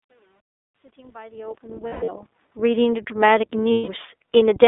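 Throughout, the iLBC codec confines the speech to roughly 300 Hz to 3.6 kHz and adds a rough, synthetic grain. That fits its 15.2 kbps, 20 ms frame mode and sets it apart from a cleaner plain telephone band. From 1.88 to 2.10 s, and again from 3.72 to 3.90 s, lost iLBC frames are concealed by repeating the last pitch cycle with added noise. Unlike a silent dropout, each gap sounds like a held, buzzy vowel, the first one broken up, and the speech snaps back immediately.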